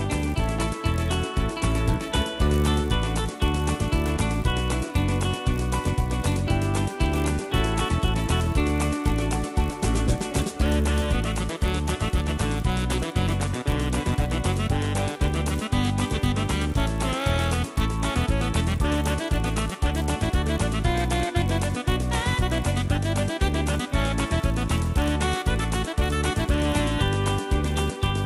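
From start to finish, a steady buzz at 50 Hz rides on the sound and falls away in silences. It comes from a resampler restarted on every block: each 20 ms block, likely converted from 24 kHz to 48 kHz, was processed alone, leaving a small error at every block edge.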